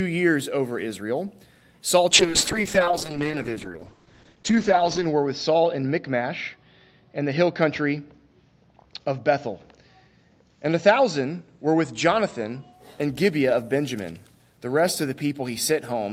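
From 2.1 s to 12.79 s, a call bitrate drop starves the encoder, with a fall that fits 48 kbps down to 8 kbps, bottoming out for about 3 s. Coarser coding turns the audio rough and watery, and bandwidth narrows from 20 kHz to 8 kHz, muffling it.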